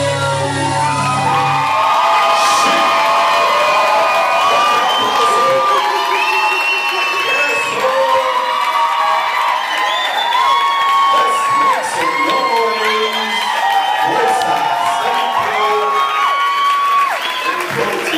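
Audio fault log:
14.42 s, electrical switching spike: a brief electrical arc, likely from a switch, relay or motor nearby, was picked up by the audio line and added directly onto the signal. It lasts only about 2 ms but reaches close to full scale, roughly -5 dBFS, so it is heard as a single hard snap sitting on top of the sound. Because it arrives through the wiring rather than acoustically, it carries no room reverberation or decay of its own.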